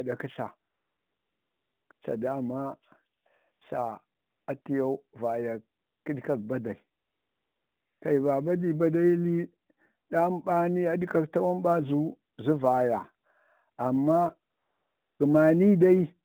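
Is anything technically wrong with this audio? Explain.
Yes, there are two faults: sample clock jitter across the whole clip, and AMR comfort noise filling pauses in the speech.

Sample clock jitter runs throughout. The converter clock wanders by a few microseconds, so each sample is taken slightly early or late. The resulting error scales with waveform slope and sits around 40 dB below the signal. It is heard as a faint roughness riding on louder, brighter speech and disappearing in pauses.

AMR comfort noise appears eleven times, between 0.70 s and 15.20 s. The longest gaps run from 0.70 to 1.90 s, 7.00 to 8.02 s and 14.52 to 15.20 s; the rest last 20 to 280 ms. In these stretches no speech frames arrive, and the receiver substitutes smooth synthetic noise for the real background, so the noise floor audibly switches in and out. All of this sits within the narrowband phone line's roughly 150 Hz to 3.6 kHz band.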